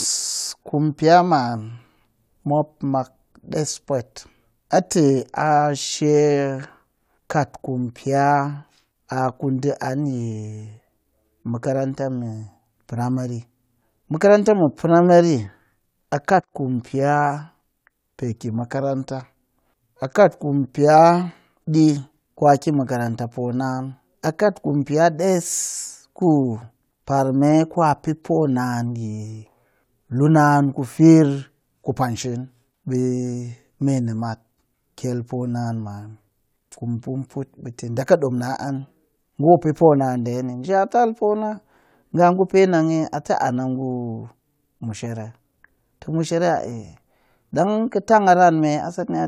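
Just a speech recording here, and there's nothing technically wrong with it that a listener would pick up on.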